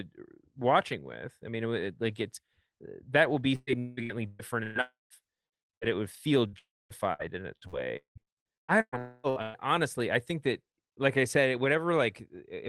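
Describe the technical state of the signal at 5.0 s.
At 5.0 s the speech is inside a long network dropout running from 4.81 to 5.13 s, likely caused by packets never reaching the receiver. The last sound is stretched into a buzzy hiss that fades, leaving near-silence before speech resumes with that portion missing. On a waveform the envelope decays into a flat, almost empty stretch. On a spectrogram, smeared, repeating energy fades into a dark gap that still stops below about 12 kHz, as the call codec does throughout.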